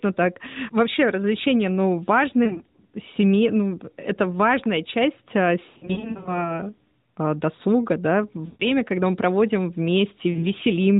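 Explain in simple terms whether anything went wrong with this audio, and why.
Speech drops out in four places. These are lost AMR speech frames. Radio errors spoiled small pieces of sound, so the phone filled them in by repeating what came before, more and more quietly. Listen after "развлечения ну" at 2.44–2.62 s, after "это важная часть а" at 5.70–6.56 s, after "а досуга да" at 8.46–8.65 s, and at 10.32–10.46 s. The voice briefly warbles, dips or smears.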